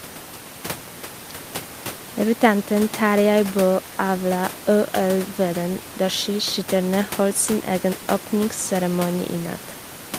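No technical faults are audible.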